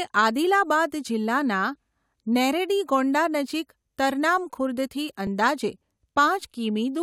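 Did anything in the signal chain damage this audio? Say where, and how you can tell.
Yes. Clock drift buffer slips, in the driver or buffer stage: clicks every 1.76 s from 1.75 s show as evenly spaced vertical spectrogram lines, likely from mismatched device clocks.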